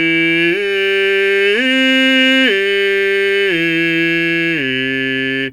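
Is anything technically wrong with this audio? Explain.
No, nothing is technically wrong with this music audio.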